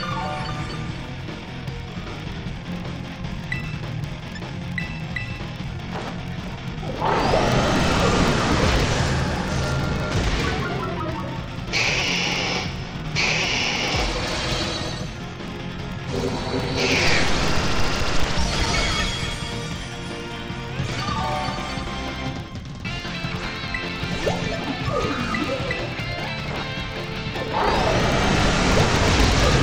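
Right from the start and for the whole clip there's a buzz at 25 Hz riding under the sound. That's a filter restarted on every block. Instead of carrying its internal state across, it starts each block from silence, so every block boundary kicks off a small transient. The 25 Hz rate suggests blocks of about 40 ms, and the buzz gets louder and quieter with the audio.

Then between 17.14 and 19.31 s you get a run of 11 CD scratch ticks, about five a second. Each is tiny, the longest around 7 ms. A blemish on the disc is wiping out more data than error correction can rebuild once per revolution, so the player patches over the damaged samples by interpolating or muting them, and every patch comes through as a little tick or dropout.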